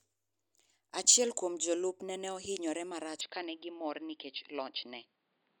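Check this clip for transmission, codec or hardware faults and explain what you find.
One fault appears in the speech: from 3.21 s to the end, the input likely switched to a poorer device. The sound abruptly turns duller and boxier with no gap at the switch. A narrower-band microphone path passes nothing above 4.9 kHz, and the new device brings its own colouration, a level about 5 dB lower, and a fresh noise floor about 40 dB below the speech. On a spectrogram the upper band cuts off sharply at 3.21 s; the waveform shrinks there.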